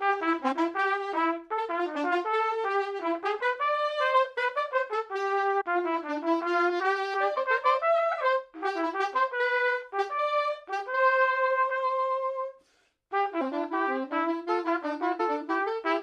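Compressed frames are skipped at 0.51–0.53, 3.39, 5.60–5.62, 7.36, 13.40–13.42 and 15.19 s, so the audio jumps ahead by roughly 50, 150, 200, 70, 200 and 100 ms. The 23.2 ms frame spacing fits 1024-sample frames at 44.1 kHz.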